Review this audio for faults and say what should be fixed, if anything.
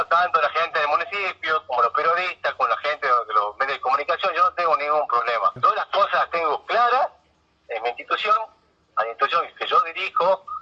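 Nothing in this audio needs to be fixed, as there are no faults to report.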